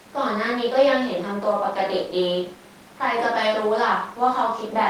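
Nothing in this bit of speech catches the ear as a technical problem, so there's really nothing here to flag.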